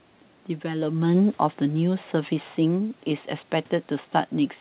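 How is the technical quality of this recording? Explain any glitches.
The recording has one clear fault, a gain drop in the middle of the speech, heard over narrowband telephone-style audio with no content above about 4 kHz, which points to a G.711-type call codec.

From 0.64 s to 3.34 s there is automatic gain falling. The automatic gain control judged the input too hot and pulled its gain down gradually, by about 6 dB over those 2.7 seconds. You hear the speech start loud and then sink steadily, with the room noise sinking along with it.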